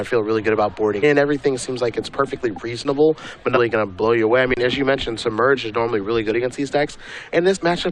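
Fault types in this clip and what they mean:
Damaged data in a compressed stream: part of the coded stream is corrupt, so the decoder misreads those frames, loses its place and hunts for the next valid frame header. You get short glitches: one at 1.02 s, then 3.55 to 3.58 s and 7.55 to 7.57 s, each around 20 ms long.
Underrun with held sample: the output buffer runs dry, and the converter just sits on its last sample value until fresh data turns up. The waveform flatlines, so the sound drops out abruptly rather than fading. There's a brief one at 2.84 s, about 10 ms, and a longer one from 4.54 to 4.57 s, about 30 ms. Roughly that much live audio went missing in each gap.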